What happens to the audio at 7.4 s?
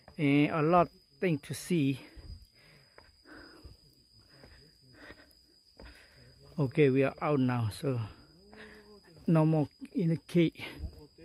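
Nothing goes wrong at 7.4 s: the audio plays straight through that moment without any dropout, glitch, distortion or other fault.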